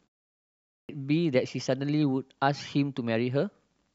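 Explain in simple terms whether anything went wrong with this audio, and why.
The output device dozed off during the opening 0.53 s of silence and took time to wake, giving a clipped start after a pause: about 0.36 s of speech, 0.53 to 0.89 s, was swallowed, so it bursts in abruptly.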